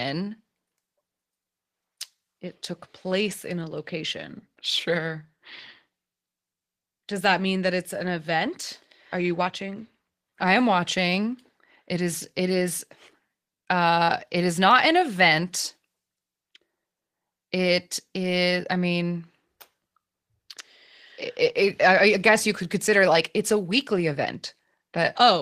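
Clock drift between sender and receiver runs through the whole clip: the sender's clock runs roughly one and a half percent slow, so the jitter buffer keeps draining. Unlike random network jitter, the timing slips all lean one way and never reverse.

Repeated timing corrections follow from that drift, from 0.25 s to 25.24 s. The receiver repeats short pieces to cover the shortfall, adding around 400 ms overall and slowing delivery to 98% speed. The result is faint hiccups and a slightly dragging, uneven tempo.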